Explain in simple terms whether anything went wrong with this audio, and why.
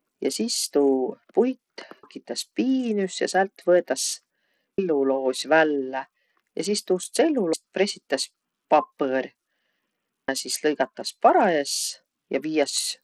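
The whole recording sounds dull and gritty, with the top end fluttering; that's likely Bluetooth SBC compression squeezing the speech too hard on its way through.

There's also audio missing between chunks: about a third of a second vanishes at 2.03 s (just before "piinüs ja säält"), 4.78 s, 7.53 s (between "sis tuust" and "pressitäs papõr") and 10.28 s. It's likely a recorder dropping sound each time it starts a new three-second block.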